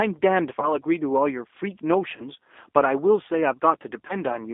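Throughout, the speech sounds slightly rough and synthetic, confined to a narrow telephone band of roughly 250 Hz to 3.6 kHz with nothing above. This is plainly audible G.729 codec damage, consistent with an 8 kbit/s VoIP link. The decoder rebuilds each 10 ms frame from a vocal tract filter, a pitch predictor and a handful of pulses, so fine detail is lost and the timbre turns rough and artificial.

At 0.60 to 0.72 s, 2.16 to 2.28 s and 4.07 to 4.15 s, the sound briefly smears and stretches, weakens and stays distorted for a moment afterward. Each event is VoIP packet loss concealed by the speech codec. About 20 ms of audio went missing each time, which points to a single lost packet. The decoder filled the gap by repeating its last pitch and filter at falling gain, and because each frame builds on the last, the damage lingers for tens of milliseconds or more.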